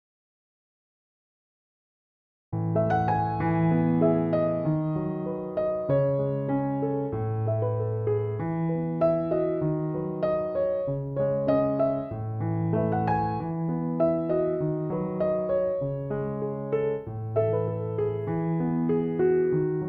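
From the very start until 2.52 s there is an audio dropout to silence. The gap is silent, with no room tone at all. The input was likely lost while the recorder kept writing silence. Sound then cuts in abruptly.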